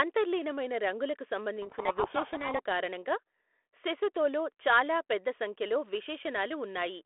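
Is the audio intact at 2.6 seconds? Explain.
No. At 2.6 s the audio is at the very end of a codec payload misread running from 1.62 to 2.60 s. The G.726 code words arrive with their bit order reversed, so the decoder buries the speech in harsh distortion. On a spectrogram this appears as dense broadband grit up to 3.5 kHz that ends abruptly at 2.60 s.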